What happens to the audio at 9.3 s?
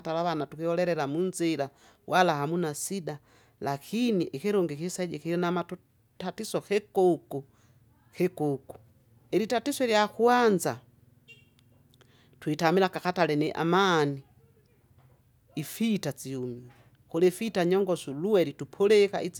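Nothing goes wrong at 9.3 s: the speech runs on cleanly through that moment, with no dropout, click, glitch or other disturbance to be heard.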